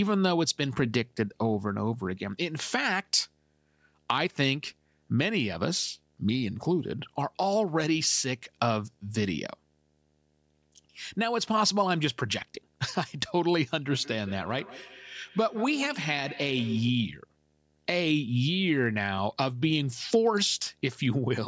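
Speech, with a video or display buzz running right through it: a low buzz at 75 Hz, which fits a monitor or video cable refreshing at that field rate and leaking into the audio path, with a fizzy hash riding on top. It sits a long way down, roughly 40 dB under the voice. The call's microphone processing is doing its usual thing, with nothing above 8 kHz, so any high line-rate whine near 15.7 kHz wouldn't make it through anyway. Then from 13.86 to 17.04 s there's a feedback echo between two devices. Each bit of speech comes back around at a steady interval of roughly 150 ms, getting thinner and more ringy with each pass, and peaks at about 17 dB below the speech. That's what you get when a second device in the same room is on the call. Its speaker plays the audio back, the microphone picks it up again, and neither echo canceller can remove sound from a device that isn't its own.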